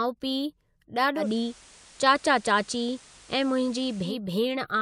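Digital radio blending to analogue from 1.15 to 4.16 s: the FM fallback adds hiss roughly 25 dB below the signal, and nudges the level about 2 dB.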